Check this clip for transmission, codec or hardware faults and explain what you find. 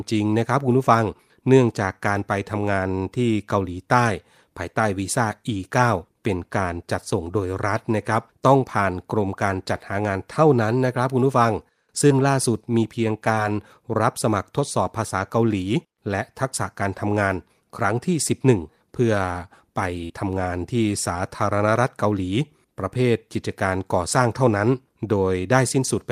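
The clip is speech with three network-related faults: two short concealed packet losses and one burst of packet loss.

Short concealed packet loss at 12.07 to 12.13 s and at 13.35 to 13.39 s: about 20 ms of audio failed to reach the decoder in time, consistent with a single lost packet. The receiver extended the preceding sound to bridge the gap, filling 27 ms the first time and 18 ms the second before blending back into real audio. The result is a short smear or wobble. The first event also stretches the timing by a few milliseconds.

Burst of packet loss at 20.05 to 20.11 s: about 40 ms went missing at once. The concealer spent 48 ms continuing and fading the last sound, so a voiced sound turns into a brief held buzz and anything else into a dying hiss. The speech then resumes a little further on, with the lost stretch simply absent.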